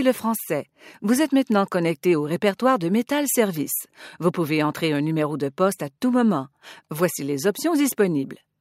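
Nothing stood out as a technical problem on listening.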